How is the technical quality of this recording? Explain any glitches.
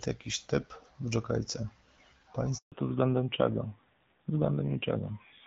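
The recording has two linked faults in the middle of the call: a brief dropout followed by a lasting loss of clarity.

At 2.58 s the speech fades out within a few tens of milliseconds and stays silent for 140 ms, until 2.72 s. This is a handover gap: the call moved between networks, no speech frames arrived during the switch, and whatever was said then is lost.

From 2.72 s to the end, the voice turns muffled and rougher, with nothing above 4 kHz. This is a fallback to narrowband. After the handover the call left HD Voice for an older narrowband codec, and the raspier texture fits a rate of about 7.4 kbit/s. Before that point, the wider, clearer band is what HD Voice at about 12.65 kbit/s sounds like.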